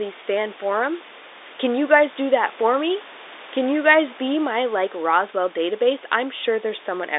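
No technical faults can be heard in the speech, which carries the narrow band of G.711 telephone coding, roughly 300 Hz to 3.7 kHz with nothing above 3.8 kHz, over room noise sitting about 20 dB below it.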